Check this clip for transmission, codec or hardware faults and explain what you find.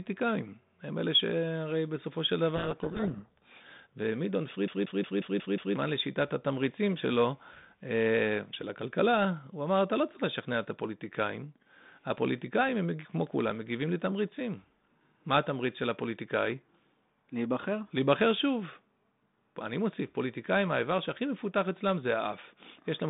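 Two faults are present in this speech clip. The speech runs through a telephone band of roughly 150 Hz to 3.7 kHz, with the light grain of G.726 ADPCM at a rate that fits 32 kbit/s.

From 2.56 to 3.61 s there is a codec payload misread. The bit order of the G.726 code words is reversed between sender and decoder. Each frame still decodes, but every difference value lands wrong. The adaptive predictor then drifts off the real signal. The speech is buried in harsh, rasping distortion until the packing matches again.

From 4.67 to 5.76 s the audio is a CD stuck on one turn. A scratch sends the laser back one track at the same point on each rotation. The same 0.18 s slice plays six times in a row. A short mute falls at every jump. The result is a fast, even stutter.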